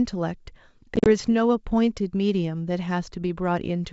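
Between about 0.96 and 1.08 s the speech breaks up with packet loss on an ADPCM call. Around 70 ms of audio drops out in several gaps spread over roughly 100 ms, the longest lasting 40 ms, which suggests about seven small packets went missing. The gaps are filled with silence, and because those packets never reached the decoder, its adaptive predictor and step size stop tracking the sender's. Where sound returns, it is slightly distorted. On a waveform the holes appear as flat, hard-edged gaps. On a spectrogram they show as blank vertical stripes cutting through the wideband G.722 content.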